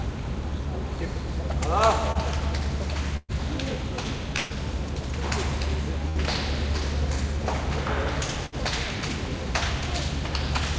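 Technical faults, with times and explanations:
2.12 to 2.18 s, short concealed packet loss: about 30 ms of the stream didn't reach the decoder in time. The receiver patched the hole by carrying the last bit of sound forward and then blending back into the real audio. What you hear is a quick smear or wobble rather than a clean gap. Anything very brief that fell in that window is gone. The band stops at 8 kHz, which points to G.722 at around 64 kbps.
3.17 to 3.32 s, 4.37 to 4.53 s, 6.09 to 6.18 s and 8.46 to 8.57 s, bursts of packet loss: each is a run of lost or late packets. About 120 ms is missing at 3.17 and 4.37 s, and about 60 ms at 6.09 and 8.46 s. The concealment stretched the last sound out and faded it, so you get a held buzz or a dying hiss before the audio jumps ahead. At 3.17 s there's also about 20 ms of dead silence. At 8.46 s another 15 ms was dropped outright.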